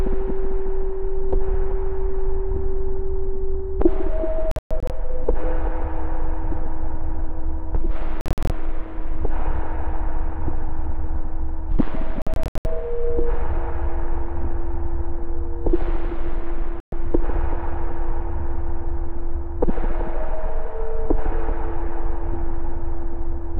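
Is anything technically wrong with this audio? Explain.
Yes, there's a digital broadcast dropout, four times. At 4.51–4.90 s, 8.21–8.50 s and 12.22–12.66 s, the receiver mutes on bad frames. You hear several short holes, totalling 216, 168 and 240 ms. At 16.80–16.93 s there's a single 120 ms silence. The gaps fit 24 ms frames, and that audio is simply gone.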